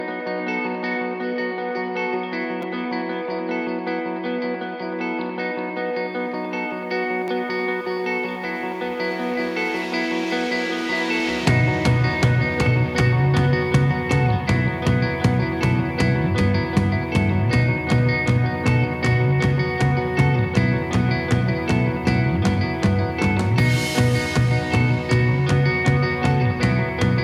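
Repeated buffer faults occur at 2.62 s and 7.28 s. A 5.8 ms slice of sound, which fits a 256-sample buffer, plays again when fresh audio arrives late: twice extra at 2.62 s and once at 7.28 s, each heard as a brief buzzy click. A waveform shows identical cycles butted together with hard joins, and a spectrogram shows thin vertical lines.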